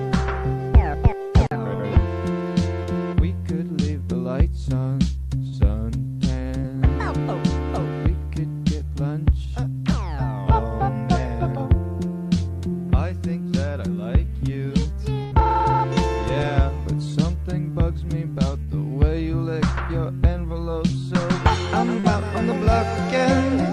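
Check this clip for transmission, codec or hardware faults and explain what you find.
Two kinds of packet-loss fault appear, both caused by audio data failing to arrive in time and the receiver patching the hole.

Short concealed packet loss occurs at 2.83, 6.60, 18.63 and 21.99 s. Each time about 40 ms went missing, and the decoder extended the preceding sound before blending back into real audio. It is heard as a brief smear or wobble. A spectrogram shows a short, unnaturally steady patch, and the waveform shows a slight seam where the blend ends.

A burst of packet loss hits at 5.47 s and 15.24 s, with about 40 ms and 80 ms lost. The receiver held the last sound and faded it down, so it is heard as a held buzz or a fading hiss before the audio jumps ahead. At 5.47 s about 8 ms of real audio was also dropped. On a spectrogram this appears as a frozen, decaying smear, and the waveform envelope sags before the audio resumes abruptly.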